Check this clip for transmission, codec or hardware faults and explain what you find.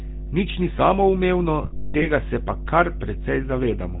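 The recording has three faults: one continuous hardware problem, one codec problem, and a burst of transmission errors.

Mains hum runs throughout. It is a steady 50 Hz tone with low harmonics, only about 10 dB below the speech. A ground loop or nearby transformer is coupling the power line into the signal.

GSM full-rate codec damage is plainly audible throughout. The speech has a buzzy, gravelly roughness and nothing above 4 kHz. This fits 13 kbps coding that drives a vocal-tract model with sparse regular pulses.

Lost GSM frames occur from 1.62 to 2.06 s. About 320 ms is missing, scattered over 400 ms, and the longest gap is around 200 ms. Each gap repeats the settings of the last good frame, producing a rough metallic ring.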